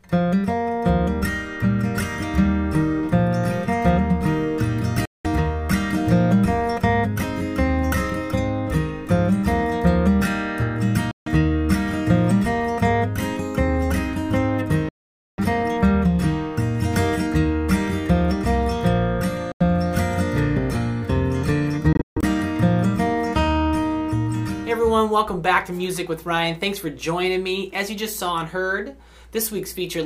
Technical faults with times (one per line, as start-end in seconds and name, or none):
5.05-5.26 Bluetooth dropout
11.11-11.28 Bluetooth dropout
14.89-15.39 Bluetooth dropout
19.52-19.62 Bluetooth dropout
21.93-22.24 Bluetooth dropout